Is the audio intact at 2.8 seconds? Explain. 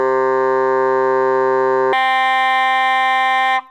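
No. At 2.8 seconds the music runs at double speed and sits a full octave, 12 semitones, higher than it should, so it sounds hurried and chipmunk-bright. This is a wrong sample rate fault lasting from 1.93 s to 3.71 s: the samples are played back at twice the rate they were captured at, with no conversion, which fits 16 kHz material being played at 32 kHz. Tempo and pitch therefore both rise by the same factor of two.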